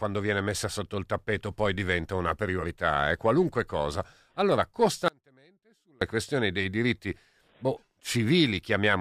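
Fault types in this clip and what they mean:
Audio dropout to a faint residue: the speech cuts out abruptly at 5.08 s and returns at 6.01 s, just before "questioni dei diritti", losing about 0.93 s. The gap is not silent but holds a faint trace of the sound, about 35 dB below normal, likely from a brief signal loss upstream while the later path stayed live. On the waveform the envelope collapses to a thin sliver with sheer edges, and on a spectrogram it appears as a dim, sharply bounded vertical band.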